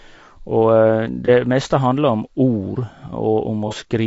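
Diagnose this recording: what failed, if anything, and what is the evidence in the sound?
Codec stage: the speech is rough and grainy throughout, likely from low-delay AAC compression at about 32 kbps. A spectrogram shows noise between the pitch harmonics and a thin, synthetic top band.

Codec or network stage: AAC frame loss with concealment at 1.25–1.29 s, just before "meste handler om", and at 3.68–3.73 s. Each is a smeared, noisy patch, consistent with one lost frame of about 30 ms filled in by the decoder from the previous spectrum. On a spectrogram each shows as a blurred vertical column.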